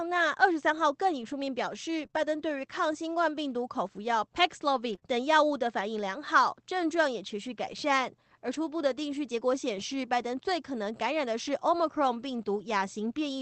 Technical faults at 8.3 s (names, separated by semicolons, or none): scattered short gaps